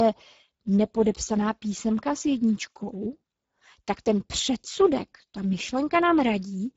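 Speech runs through the Speex codec for the whole clip, with plainly audible coding damage: the voice sounds hoarse and grainy because too few bits describe the excitation, which points to a low setting near 10 kbps. Nothing is present above 7.7 kHz.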